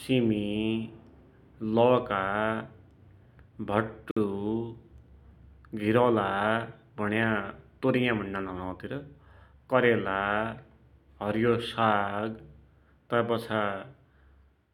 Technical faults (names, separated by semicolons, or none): Bluetooth stall